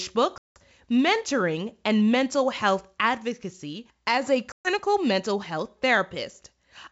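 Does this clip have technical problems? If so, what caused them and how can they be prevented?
Yes: packet loss on an ADPCM call causes hard-edged silent gaps at 0.38–0.60 s before "mentoring and mental" and at 4.52–4.68 s between "advocacy as a" and "mental health". Each gap is a flat blank column on the waveform and spectrogram. About 180 ms and 130 ms of audio are missing. Afterwards the decoder's predictor and step size are out of step, so the speech resumes slightly distorted. Packet-loss concealment, jitter buffering and a more reliable network path would prevent this.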